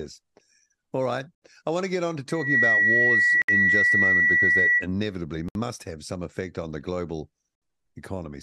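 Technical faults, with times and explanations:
1.35, 3.42, 5.49 and 7.55 s: gap at a join of encoded pieces. Silences of about 67 to 70 ms open in the speech every 2 s. Encoder start delay and end padding were left in at each join. The sound resumes exactly where it stopped, unlike a dropout, which loses material.
2.28 to 4.87 s: loudspeaker feedback squeal. A single 1.9 kHz tone swells over roughly 0.3 s to about 10 dB above the speech as the microphone re-amplifies its own loudspeaker. Its self-building rise sets it apart from steady hum or interference.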